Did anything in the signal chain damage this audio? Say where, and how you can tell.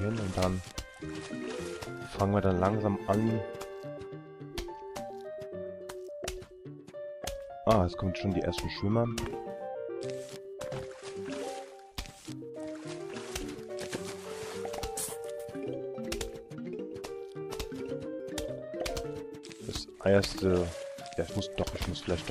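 Yes. At the codec stage, damaged data in the compressed stream produces a brief glitch from 9.24 to 9.26 s. The decoder misreads corrupted frames and loses sync until the next valid header, leaving a short disturbance on the spectrogram and in the waveform.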